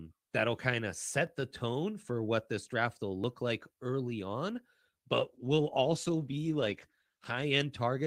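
At about 5.15 s there's a call bitrate drop: the encoder gets squeezed from 32 to 14 kbps, less than half its rate, so the speech goes coarse, watery and dull until it recovers near 7.69 s.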